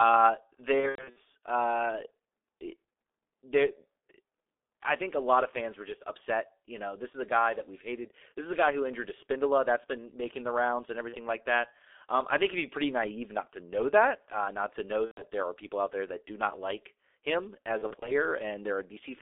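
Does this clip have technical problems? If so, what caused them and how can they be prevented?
Yes. The G.723.1 codec affects the whole clip. The speech is band-limited to roughly 300 Hz to 3.6 kHz and sounds heavily muffled and hoarse, with smeared consonants, which fits a 6.3 kbit/s setting. The codec's 30 ms frames and slow-updating voice model cannot follow fast detail. Using a wideband codec such as Opus at a higher bitrate would prevent this.

VoIP packet loss concealed by the speech codec occurs at 0.80–1.19 s, 11.09–11.17 s (after "making the rounds and", before "like that"), 15.05–15.23 s (after "uh not to know", before "there are people out") and 17.78–18.12 s (after "do not like him"). Each gap is filled with fading sound because the decoder extrapolated from its last pitch and filter. At 0.8 s and 17.8 s the losses are scattered over about 360 ms and 240 ms. A jitter buffer with forward error correction, or a more stable network path, would reduce the loss.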